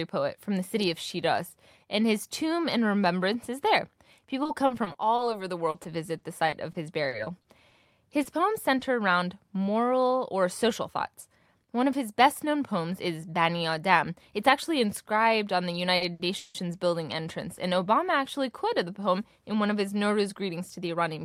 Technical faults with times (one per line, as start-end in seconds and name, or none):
4.43-8.83 repeated packet loss (robotic sound)
10.83-12.54 jitter buffer speed-up
15.97-16.57 repeated stalls (stutter)
20.17-21.24 jitter buffer speed-up